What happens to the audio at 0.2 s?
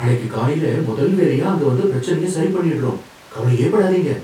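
Nothing goes wrong at 0.2 s; the speech carries on intact through that moment.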